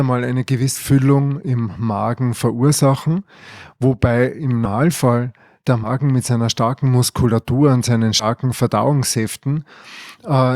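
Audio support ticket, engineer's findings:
Speech jumps ahead at 0.75, 4.65, 5.83 and 8.19 s. Compressed frames skipped: decoder drops whole frames, which fits a 20 ms frame, so roughly 0.07 to 0.2 s of audio goes missing each time.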